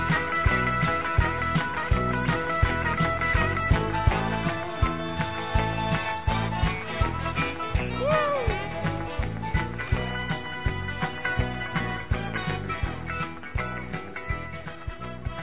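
No technical faults can be heard anywhere in this audio. Nothing in it calls for a timestamp or a note of any problem.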